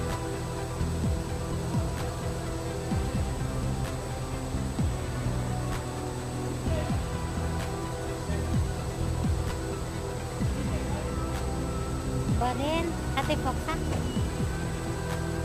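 A thin, steady whine at a fixed 8 kHz runs throughout, roughly 20 dB below the sound: USB whine, from the bus's 125-microsecond microframe current draw leaking into the audio.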